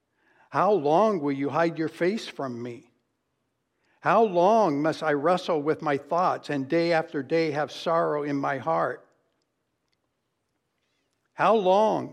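No technical faults can be heard at any point in this speech recording. There is no moment that needs a timestamp or a closer look.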